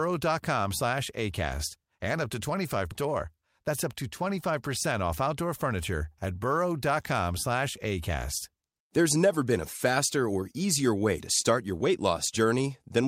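Speech clip with a skip ahead at 2.91 to 2.93 s, where about 0.7 s of audio vanishes with no silence or fill, unlike a dropout gap. Then, from 3.01 to 4.56 s, a jitter buffer speed-up plays the speech at 108% by trimming small pitch-period pieces, roughly 0.15 s in total, so it sounds hurried while pitch stays unchanged, unlike resampling.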